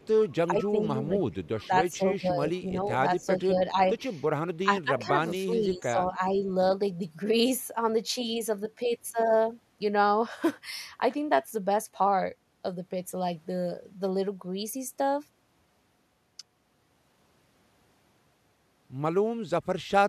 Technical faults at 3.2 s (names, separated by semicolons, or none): speech suppressed in double talk; echo leak